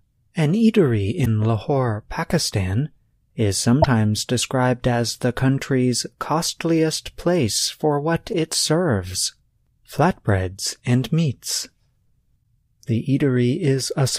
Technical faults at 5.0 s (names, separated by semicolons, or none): none